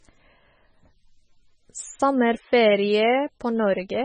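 Speech throughout with a watery, swirly quality and smeared consonants, likely from MP3 compression at a very low bitrate (around 16 kbps); a spectrogram shows flickering holes and a hard ceiling at 9.3 kHz.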